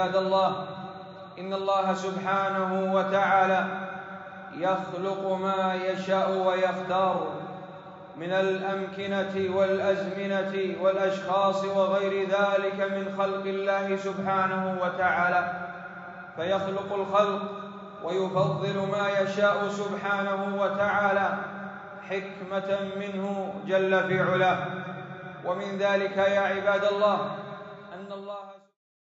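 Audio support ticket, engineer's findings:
No faults found: the signal carries the usual call-microphone processing with bass rolled off and nothing above 8 kHz, and a smooth editorial fade-out from around 27.5 s reaches silence at 28.79 s.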